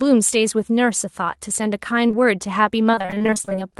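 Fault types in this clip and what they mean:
Short concealed packet loss: two back-to-back holes of about 20 ms each, from 2.07 to 2.15 s, were patched by extending the preceding sound. It is heard as a brief smear or wobble. A spectrogram shows smoothed, repeated harmonics there, and the waveform shows a slightly too-regular stretch.
Repeated packet loss (robotic sound): from 2.91 to 3.73 s, 18 gaps of up to 23 ms each were filled by continuation, covering almost half that span. The sound turns choppy, with pieces missing. On a spectrogram this appears as striped, smeared harmonics, and the waveform shows repeating periodic patches.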